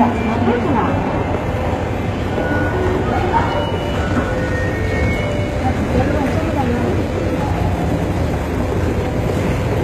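HE-AAC compression runs through the whole of this everyday sound recording, and the damage is plainly audible. The treble is artificial: the codec most likely coded only the lower spectrum and rebuilt the upper bands by copying lower content upward under a coarse envelope. That rebuilt top lacks the original harmonic alignment, so high-frequency detail sounds gritty and metallic. Nothing survives above 14.8 kHz, and the degradation suggests a bitrate of around 20 kbps.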